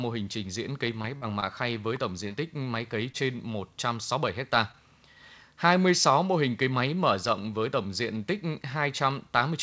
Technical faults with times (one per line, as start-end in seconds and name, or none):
1.02-1.29 short concealed packet loss
1.40-1.44 short stall from a late packet
1.96 electrical switching spike
2.28-2.32 short concealed packet loss
3.12-3.16 short concealed packet loss
4.72-4.76 short concealed packet loss